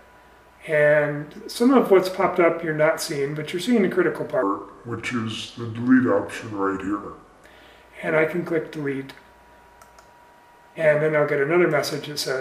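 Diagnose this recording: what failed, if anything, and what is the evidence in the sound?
A section at the wrong speed runs from 4.43 s to 7.45 s, where the sound slows to about 0.77 times normal and drops roughly five semitones. It is likely a playback or editing clock mismatch. Unlike a pitch-shift effect, tempo and pitch fall together, and unlike wow, they hold steady with abrupt edges.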